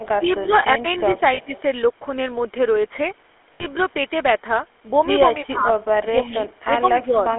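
Speech throughout has a buzzy, gravelly roughness and a narrow telephone band of roughly 300 Hz to 3.4 kHz, the sound of the GSM full-rate codec, consistent with its 13 kbps pulse-excited vocal-tract model. At 1.34 to 1.39 s (40 ms) and 3.54 to 3.67 s (60 ms), the sound briefly holds on a rough, metallic ring. These are lost GSM frames, which fits two and then three missing 20 ms frames concealed by repeating the last good one at a falling level.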